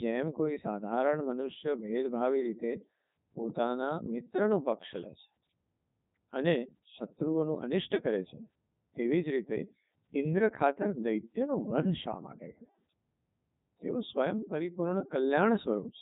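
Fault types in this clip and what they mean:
Codec 2 vocoder: speech is resynthesised from sine waves, so it sounds heavily robotic and buzzy rather than smeared like a waveform codec. Nothing is above 3.8 kHz, which fits a 3.2 kbit/s mode.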